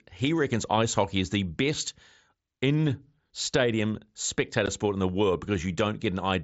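At 4.66 s the speech drops out for about 15 ms, a case of unconcealed Bluetooth headset packet loss: a couple of voice packets between headset and phone never arrived, and nothing was synthesized to cover the gap. The hole has hard edges that can click. The link runs the wideband mSBC headset codec, with its light graininess on louder sounds, and because nothing covers the gap it reads as a sharp missing slice rather than a smeared or repeated fragment.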